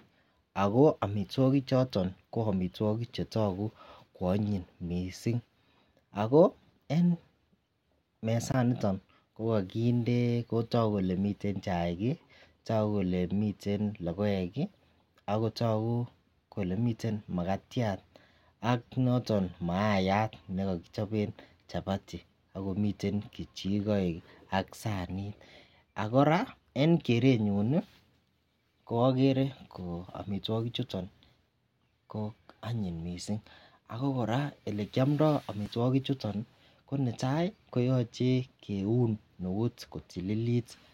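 At 8.52 s the speech drops into a block of digital silence about 20 ms long. At 35.66 s a shorter block of about 5 ms follows. The sound cuts out with no fade, which points to an unfilled output buffer. The shorter block is heard as a tick.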